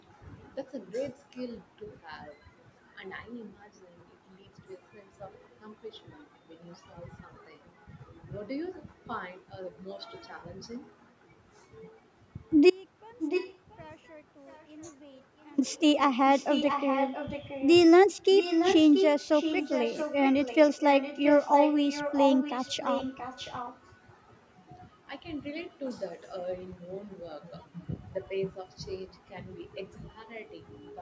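At 12.70 s the speech drops out to a faint residue until 15.58 s, a gap of about 2.9 s. The loss is abrupt rather than a pause or fade, and what remains sits roughly 30 dB below normal level, a faint sound. The likely cause is a break in the transmission path while the downstream chain stayed live, so the hole is not fully silent.

An echo leak overlaps and follows this. From 13.21 to 13.81 s, and again from 14.48 to 14.66 s, a delayed copy of the speech appears, the first about 10 dB below the speech and the second much weaker, about 35 dB down. Longer stretches follow from 16.31 to 17.74 s and from 18.37 to 23.79 s, both about 10 dB down. Every instance trails the original by 679 ms. The likely cause is a far-end loudspeaker whose echo canceller let some of the returned signal through. In the band-limited call audio, which stops at 8 kHz, the repeats are heard as a trailing copy.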